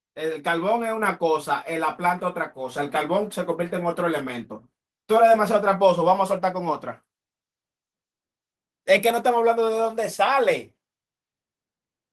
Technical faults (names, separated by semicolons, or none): microphone volume stepped up